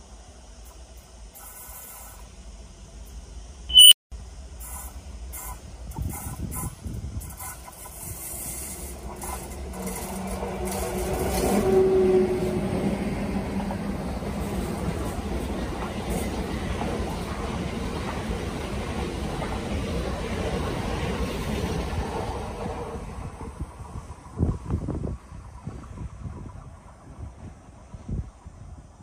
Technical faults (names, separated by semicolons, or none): unstable filter; corrupt frame decoded